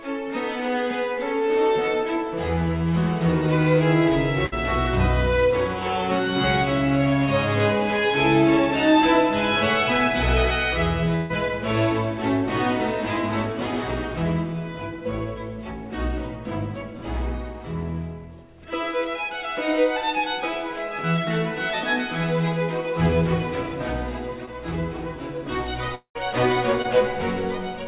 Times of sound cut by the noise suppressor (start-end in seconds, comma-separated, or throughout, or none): none